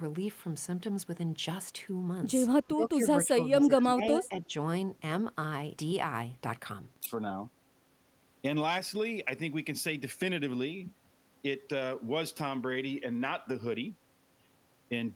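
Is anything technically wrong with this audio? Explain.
Yes. From 2.66 to 2.97 s, 3.17 to 4.12 s and 4.29 to 4.53 s there is speech suppressed in double talk, likely because an echo canceller mistook overlapping talk for echo, pulling the speech down by up to around 15 dB. From 4.13 to 4.27 s there is an echo leak, likely from a loudspeaker's pickup getting past cancellation, leaving a faint copy of the speech about 232 ms late, roughly 20 dB down.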